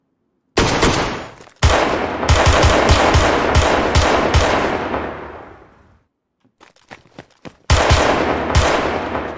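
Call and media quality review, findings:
No audible faults found on review.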